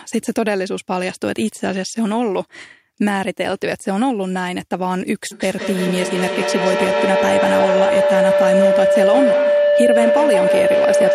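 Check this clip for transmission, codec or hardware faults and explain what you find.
One fault is present. From 5.31 s onward, a microphone-to-loudspeaker loop gains level on each pass, causing feedback howl: a tone near 500 Hz with repeats about every 150 ms, up to about 4 dB above the speech.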